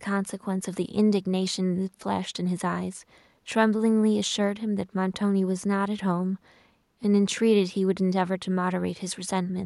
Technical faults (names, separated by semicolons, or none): none